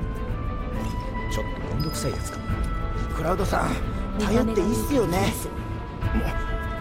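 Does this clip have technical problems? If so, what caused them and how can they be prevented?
No, no faults are audible.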